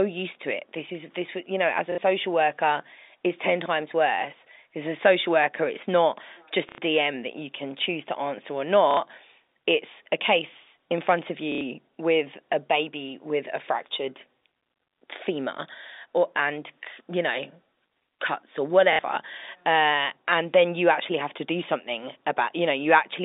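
Packet loss with last packet repeated occurs at 1.92 s, 6.69 s, 8.91 s, 11.52 s and 18.93 s, with gaps of 60 ms, 90 ms, 60 ms, 90 ms and 60 ms. At each gap the receiver kept replaying the previous block of speech until fresh audio arrived. The repeats form a brief, buzzy robotic stutter. The pattern fits 30 ms packets, a repeat rate of about 33 Hz, heard within the narrow 250 Hz to 3.7 kHz telephone band of the G.711 line.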